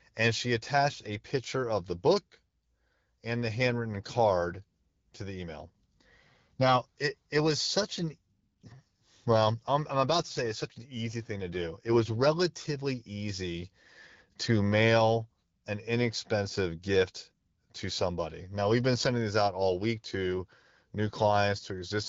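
AMR rate drop at 3.68 to 5.40 s, after "and the", and again at 10.19 to 12.20 s, after "well I'm I'm": the link weakened, and the HD Voice codec shifted bits from speech to error protection, which fits a fall from 12.65 to 8.85 kbit/s. Speech turns rougher and more synthetic, with no gap or band loss.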